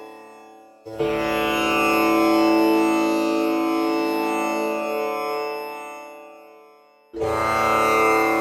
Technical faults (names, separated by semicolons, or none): none